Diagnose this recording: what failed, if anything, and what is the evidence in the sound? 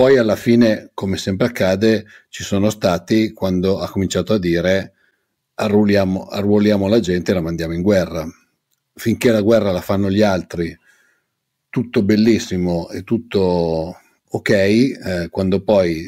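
Nothing failed in this recording, and the sound gives no evidence of a fault at any stage of the chain.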